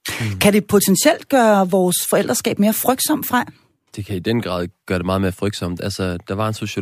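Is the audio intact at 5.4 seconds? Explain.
Yes, at 5.4 seconds the speech runs intact, with no dropout, glitch or other fault at that moment.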